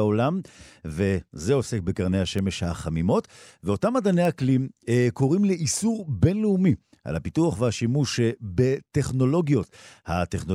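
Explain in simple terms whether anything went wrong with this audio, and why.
Three bit error spikes, single sharp ticks at 2.39, 4.25 and 5.02 seconds: one flipped digital bit briefly throws the waveform off, unlike a dropout, where sound goes missing.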